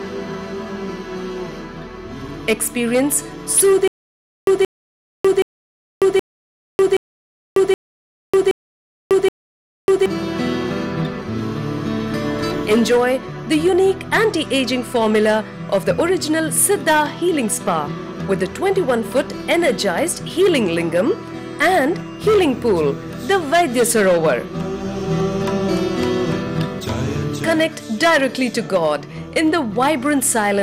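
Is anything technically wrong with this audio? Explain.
Yes, there is one fault. From 3.88 to 10.06 s there is stutter with silent gaps. The playback likely stalled, so the same 176 ms fragment repeats eight times, each followed by 596 ms of silence, and the sound meant for that span is lost.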